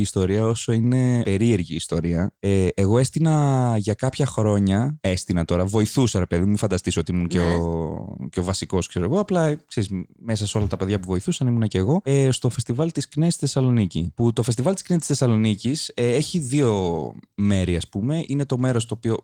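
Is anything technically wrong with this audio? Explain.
No, nothing is technically wrong: the speech carries Opus voice compression at about 24 kbps in its hybrid mode, with the full band kept up to roughly 20.3 kHz and only the light coding traces that setting leaves.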